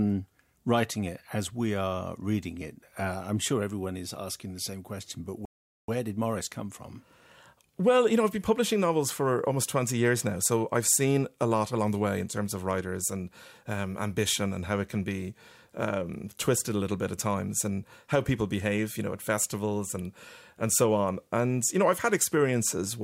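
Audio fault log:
5.45 to 5.88 s, playback stall: the speech cuts out abruptly just after "the same question but" and the output goes silent for about 0.43 s before the sound resumes. That dead gap in mid-flow is likely what a player produces when it runs dry of buffered data or its audio thread is held up, and it simply emits nothing until delivery catches up and playback carries on.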